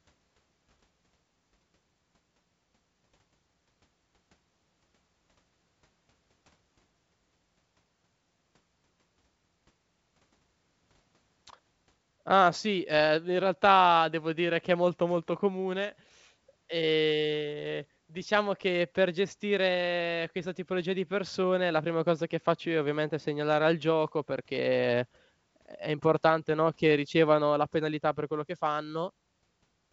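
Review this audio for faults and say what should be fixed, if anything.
Nothing in this speech clip needs fixing. It carries G.722 wideband telephone coding at 64 kbit/s, which keeps the speech bandwidth out to around 7 kHz, with codec damage that is none or faint.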